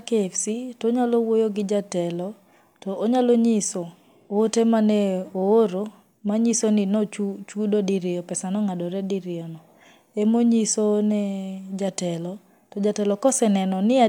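Nothing in the recording registers as a technical fault at any point.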